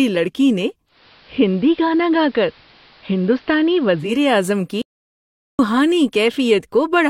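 At 0.86 s, just after "لڑکی نے", the receiver's digital radio blending to analogue kicks in: it loses the digital stream and cross-fades over roughly 223 ms to the station's AM broadcast. The audio becomes band-limited, and a steady hiss sits about 30 dB below the signal. Level stays matched, so the change is heard as dull, hissy sound rather than a jump in volume. It blends back to digital at 4.21 s, just before "اعظم کی".

At 4.82 s, right after "اعظم کی", the sound cuts to an audio dropout to silence lasting about 772 ms, until 5.59 s. The gap is completely silent, with no hiss or room tone, and the sound resumes abruptly mid-flow. Whatever was spoken during that interval is missing. The likely cause is a momentary loss of the input feed while the recorder kept writing silence.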